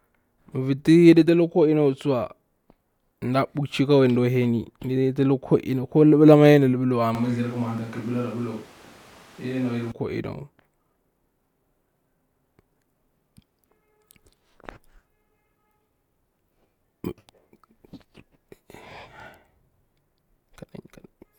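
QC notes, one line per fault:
7.15 to 9.92 s, switch to a distant microphone: the close microphone's feed was likely lost, leaving a far-off pickup. The speech turns suddenly roomy and hollow with thinner bass, and room noise rises to roughly 20 dB below it, though loudness holds steady.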